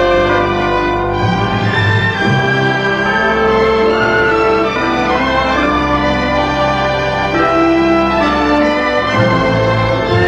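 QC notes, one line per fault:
Nothing to flag here; the sound comes across without any glitches, dropouts or other trouble worth noting.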